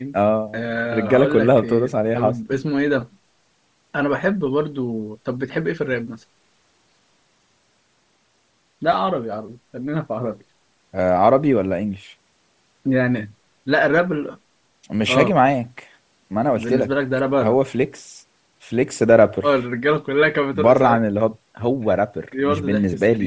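The whole speech clip has a breathy, grainy top end, likely Bluetooth LC3 compression, which fits a low rate around 32 kbps, with everything above 8 kHz gone. At 8.92 s there are lost LE Audio frames, a brief blip of about 7.5 ms where the decoder repeats the last spectrum and a tiny noisy smear shows through. At 14.31 to 14.35 s a longer gap of about 37.5 ms, roughly five 7.5 ms frames, smears into noise and fades.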